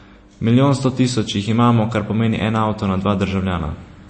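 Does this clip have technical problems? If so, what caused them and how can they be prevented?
Yes. Throughout, the speech sounds watery, with nothing above 8.3 kHz. This is likely MP3 compression, consistent with a low bitrate around 32 kbps. Encode at a higher bitrate or keep a lossless copy.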